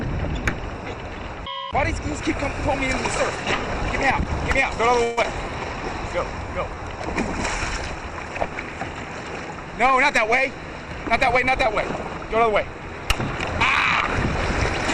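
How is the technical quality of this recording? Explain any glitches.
The recording has three timing glitches, all in network playback.

From 5.03 to 5.26 s there is what sounds like a long network dropout. For about 204 ms the last sound is carried on as a fading buzz or hiss, and about 80 ms of audio never returns. The likely cause is a stall in arriving packets. On a spectrogram this shows as smeared, decaying harmonics before the audio resumes abruptly.

From 5.48 to 6.98 s a jitter buffer slow-down follows. The receiver repeats short pitch-period pieces to rebuild its reserve, adding 73 ms in total. The audio plays at 95% speed with unchanged pitch and drawn-out sounds. The waveform shows near-identical repeated cycles.

From 11.97 to 12.89 s a jitter buffer speed-up removes roughly 70 ms in short pitch-period cuts to shed excess buffered delay. Playback runs at 107% speed at the same pitch and sounds hurried. 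Spectrogram features look compressed in time, with small splices in the waveform.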